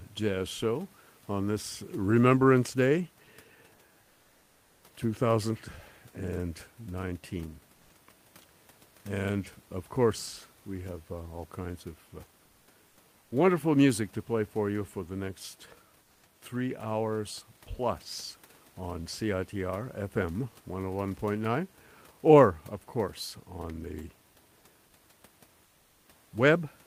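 At 7.75 to 7.89 s, 12.89 to 12.97 s, 13.19 to 13.31 s (just before "wonderful music to play") and 25.65 to 26.05 s, comfort noise replaces the background. The room noise, about 35 dB below the speech, gives way to a smooth, featureless hiss. It is about 1 dB louder in the first gap and about 2 dB quieter in the others. The likely cause is Opus discontinuous transmission, with the receiver synthesising the filler.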